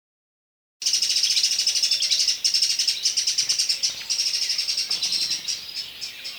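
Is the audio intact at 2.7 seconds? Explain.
Yes, the audio is intact at 2.7 seconds, with no fault at that moment.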